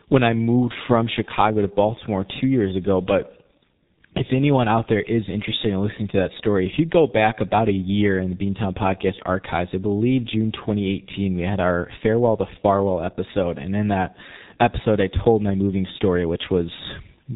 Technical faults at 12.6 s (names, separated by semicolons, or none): G.723.1 codec